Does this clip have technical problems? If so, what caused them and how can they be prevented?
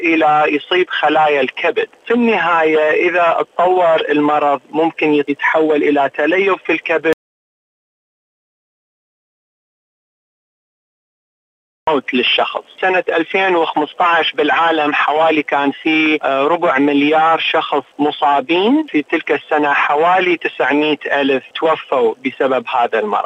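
Yes. An audio dropout to silence runs from 7.13 to 11.87 s. The sound cuts off mid-flow, leaving silence with no room tone, unlike a noise gate's gradual closing. A lost input connection is the likely cause. Secure connections and watch input meters while recording.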